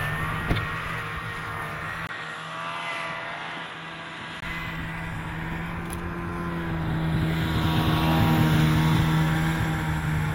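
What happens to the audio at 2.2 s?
At 2.2 s you're inside a stretch from 2.07 to 4.42 s where the input likely switched to a poorer device. After a 20 ms gap, everything above 11.4 kHz vanishes, the level dips a few dB, and a faint new noise floor appears, so the sounds turn dull and boxy.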